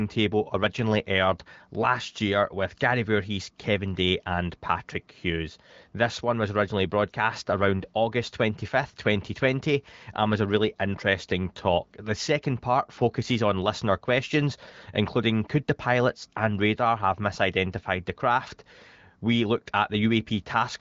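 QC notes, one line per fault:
No faults found in this speech clip, which carries the band limit of the AMR wideband (HD Voice) codec with nothing above about 7.6 kHz.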